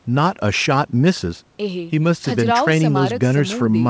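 No technical faults occur anywhere in the speech; its band stopping at 8 kHz is simply what the G.722 call path it came through normally gives.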